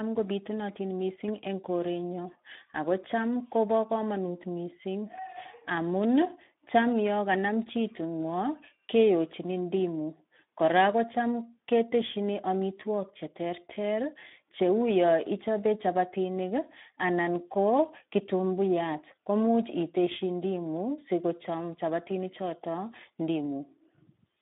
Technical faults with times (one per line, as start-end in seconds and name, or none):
0.00-24.42 Speex codec